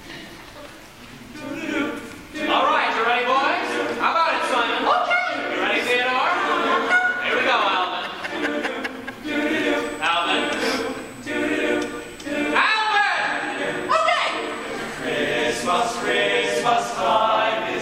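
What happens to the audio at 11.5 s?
At 11.5 s the audio carries USB whine, a fixed-pitch tone running from 9.83 s to 16.54 s. The USB bus pulls current in 125-microsecond microframes. That ripple leaks into the audio through power or ground. Here it sits at 8 kHz, with its strongest component at the 16 kHz multiple. The whine stays steady in pitch. It lies roughly 20 dB below the signal, a thin high tone over the sound.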